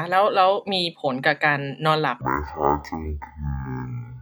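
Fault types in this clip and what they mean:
Stereo read as mono: from 2.21 s to the end, interleaved left and right samples play back-to-back as one channel, so speech drops to half speed, an octave lower.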